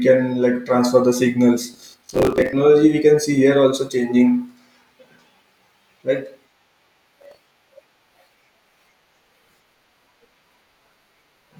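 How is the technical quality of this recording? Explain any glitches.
The recording has two bursts of processor overload crackle, from 1.74 to 2.53 s and from 7.22 to 7.64 s. Around 10 ms buffers miss their deadlines repeatedly and replay stale audio, producing gritty, hard-edged tearing over the speech.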